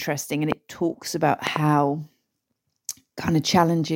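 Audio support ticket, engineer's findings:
Loud pop at 0.52–0.54 s, before "talks about". Double pop at 1.47–1.58 s, after it. Peaks roughly 20 dB over speech. Likely plug or switch transient.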